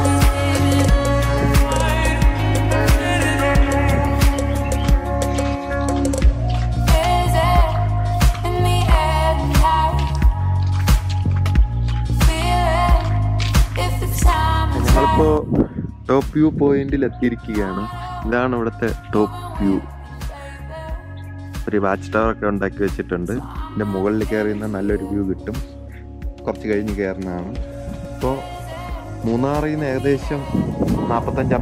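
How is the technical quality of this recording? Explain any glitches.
The technical quality of the recording is good, with no glitches to explain.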